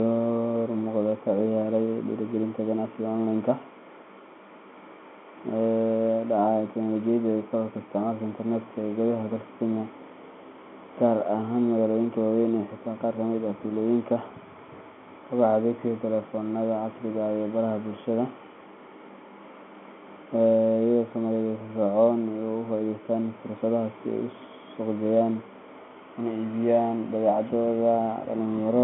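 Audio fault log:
No faults logged; the speech carries through a G.711 A-law telephone path at 64 kbps, with the line band running from 150 Hz to 3.4 kHz and nothing above 3.8 kHz.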